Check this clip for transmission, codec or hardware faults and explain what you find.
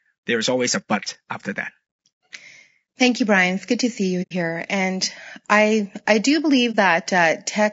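Two faults are present: codec damage across the whole speech clip, and two short dropouts from lost frames.

Low-delay AAC compression runs throughout. The speech is plainly rough and grainy, with noise filling the gaps between harmonics and a top band that sounds lowered or synthetic. The likely cause is AAC-ELD at a low rate, which fits a bitrate around 32 kbps. With too few bits for its roughly 500 frequency lines per frame, the encoder codes them coarsely.

AAC frame loss with muting occurs at 4.22 to 4.33 s, right after "good to see you", and at 6.71 to 6.76 s, after "I I do". The decoder zeroed the missing spectrum, and the overlapping windows fade the sound out and back in. The first gap fits three lost frames of about 30 ms each and is a soft-edged hole. The second fits a single frame and is a brief dip.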